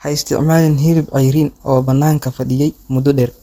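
From 0.87 s to the end, a time-stretched section speeds the speech by 1.35 times at unchanged pitch, sounding rushed. The likely cause is software dropping short pieces. Spectrogram harmonics stay level while syllables compress.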